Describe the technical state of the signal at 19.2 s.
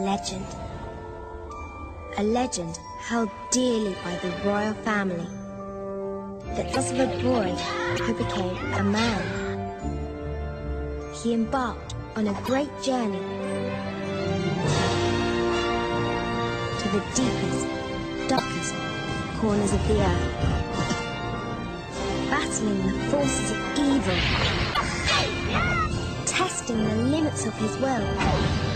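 At 19.2 s the signal is intact, with no dropout, distortion, glitch or other fault to be heard at that point.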